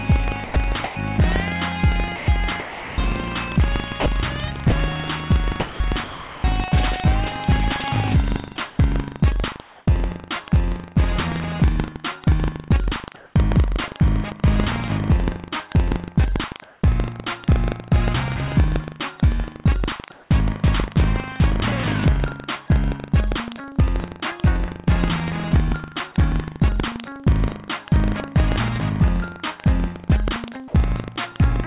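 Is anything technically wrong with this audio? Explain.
Yes, there are several problems.

Buffer tearing runs throughout: a 25 Hz rattle on the signal, as writer and reader cross each period and splice in a sliver of audio roughly 150 ms old.

Sound chopped by the voice detector occurs from 0.44 to 6.44 s. About 1.4 s of quiet passages drop out into synthetic fill, likely from the detector toggling transmission repeatedly, so the sound is choppy.

Sound dropped by the voice detector occurs at 8.56 s. A brief 10 ms piece of sound vanishes under comfort noise, likely because the detector took it for background.

Comfort noise in place of the background occurs from 8.56 to 9.86 s and at 13.16, 16.64 and 20.12 s, each for 0.18 s. The real background turns into a smoother noise of a different tone, likely discontinuous-transmission fill. In the later three, it shifts level by about 6 to 7 dB.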